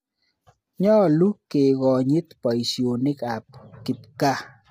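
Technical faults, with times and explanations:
Throughout: low-delay AAC compression. The speech sounds rough and grainy, with a hiss between the voice harmonics and a thin, synthetic-sounding top band. This is likely AAC-ELD, whose short frames resolve pitch harmonics poorly, and the heavy damage fits a bitrate around 24 kbps. On a spectrogram the harmonic stripes look smeared, with noise filling the gaps between them, and the upper band appears blotchy and patterned rather than continuous.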